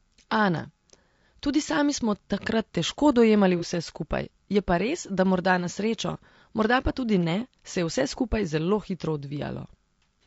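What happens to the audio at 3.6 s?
From 3.59 to 3.64 s there is AAC frame loss with concealment: the decoder rebuilt about 30 ms, consistent with a single lost frame, from the previous spectrum. Unlike a plain dropout, it gives a brief smeared, noisy patch rather than a silent gap. Underneath, the audio carries the rough, grainy texture of low-delay AAC compression, likely AAC-ELD at 32 kbps.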